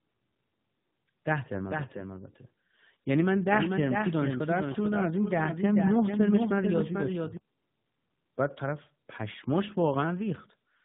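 Tandem speech coding runs through the whole clip: the audio appears to have been decoded and re-encoded by two low-rate speech coders in sequence, each compounding the other's damage. The result is rough, muffled and warbly speech, with nothing above 3.8 kHz.

A doubled audio track runs from 1.69 s to 7.37 s: a second, full-band copy trails the original by about 400 ms at roughly 5 dB lower, with no reverb colour. It is likely a slower parallel capture path, and it starts and stops abruptly.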